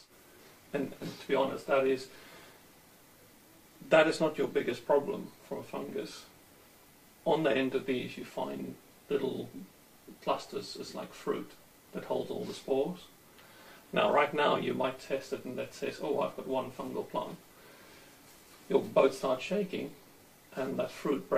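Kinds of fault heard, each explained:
No technical fault can be heard anywhere in the clip. There is nothing to list under any kind.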